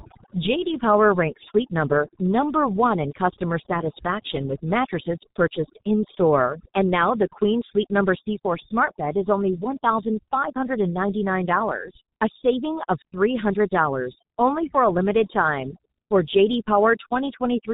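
From start to finish the speech carries overdone noise removal: a noise reducer set too aggressively has pulled individual frequency bands down to near nothing wherever they sat close to its noise estimate, so the background drops to an unnatural hush with twinkling specks.

Layered over that is heavy G.723.1 codec damage, also present throughout. Nothing above 4 kHz survives, and the slow-moving voice model smears detail across its 30 ms frames. The result is muffled, hoarse speech with blurred consonants, consistent with the codec's higher rate of roughly 6.3 kbit/s.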